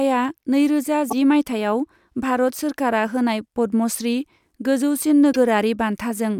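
At 1.06–1.13 s and 5.29–5.36 s, damaged data in the compressed stream makes the decoder misread frames and lose sync, producing a brief chirp, squawk, click or short hole.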